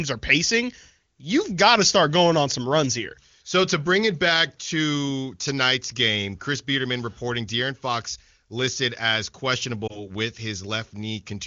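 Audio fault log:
9.87–10.04 s, lost AMR speech frame: just after "listed as", a brief dip or warble as the decoder conceals about 20 ms of missing audio, consistent with one dropped frame within the wideband stream.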